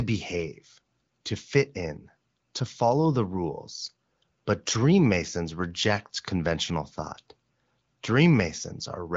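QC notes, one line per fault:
No faults to note.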